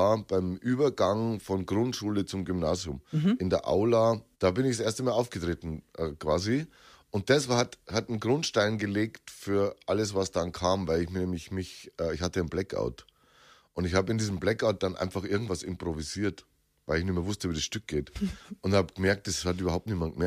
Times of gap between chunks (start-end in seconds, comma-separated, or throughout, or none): none